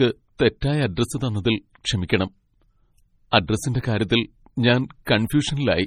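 Throughout the speech, heavy codec damage is audible, likely from MP3 compression. Nothing sounds above 18.6 kHz. Weak frequency lines drop in and out between frames. The sound turns watery and swirly. S sounds chirp metallically. Attacks smear. This fits a bitrate near 32 kbps.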